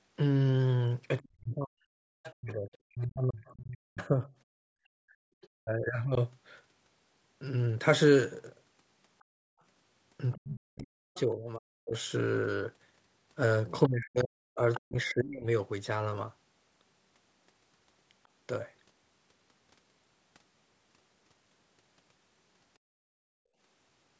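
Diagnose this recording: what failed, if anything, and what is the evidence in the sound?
The failure is in call processing. The echo canceller likely mistook simultaneous talk for echo and suppressed the near talker. From 1.19 to 6.17 s and from 10.32 to 15.46 s the speech dips and breaks up, falling by roughly 40 dB at worst, for about three seconds in each span.

The other side's voice is leaking through, probably because the echo canceller left part of the loudspeaker signal in the microphone path. A second voice is heard from 1.25 to 2.32 s at about 20 dB below the speech and from 9.19 to 14.8 s at about 15 dB below. Brief scraps appear at 5.41 to 5.48 s (about 30 dB down) and 18.24 to 18.28 s (about 40 dB down).

The background was gated by the echo canceller, which clamped the microphone hard while the loudspeaker played. The room sound drops out from 9.24 to 9.6 s, by up to about 35 dB, and from 22.79 to 23.58 s, by up to about 39 dB, then returns when the suppression releases. 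The call's band limit of 8 kHz is expected.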